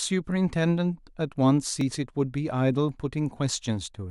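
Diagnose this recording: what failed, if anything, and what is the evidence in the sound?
The speech has one tiny skip at about 1.81 s, where roughly 10 ms of audio simply goes missing and the waveform steps abruptly. That's an overlap between stream segments, at the network or streaming delivery stage. The stream seems to be chopped into 2-second segments. Two neighbouring segments claim overlapping time stamps, so the player trims what it thinks is duplicated material. That material was never really doubled, and the cut leaves the skip.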